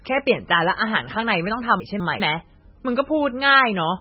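A speech recording whose whole length is band-limited, with nothing above 5.6 kHz, and carries heavy watery, swirling smearing on consonants and onsets. This is likely MP3 compression at a very low bitrate, consistent with about 16 kbps, where the encoder drops the treble and switches weak frequency lines on and off between frames. Between 1.8 and 2.2 s the chunks are out of order: two 200 ms segments are swapped, with one arriving a chunk late. Nothing is lost, but that stretch sounds jumbled, with hard joins where the order breaks.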